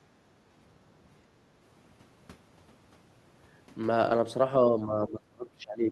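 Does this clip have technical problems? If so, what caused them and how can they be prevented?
Yes. From 4.7 s to the end, the echo canceller likely treated both sides talking at once as echo, so speech is suppressed in double talk, dropping by around 20 dB. Prevent it with a canceller that has reliable double-talk detection, plus a headset to keep loudspeaker sound out of the microphone.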